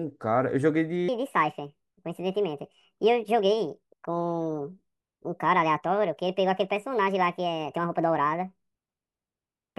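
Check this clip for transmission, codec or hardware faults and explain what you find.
One fault is present: a wrong sample rate affecting everything from 1.09 s to the end of the clip. From that point the speech runs 1.5 times too fast and sits about 7 semitones higher, making voices sound squeaky and rushed. The ratio fits audio recorded at 32 kHz being played back at 48 kHz without conversion, so speed and pitch rise together. On a spectrogram, harmonics and formant bands jump upward by a factor of 1.5 at 1.09 s, and the waveform's syllable envelopes look compressed in time.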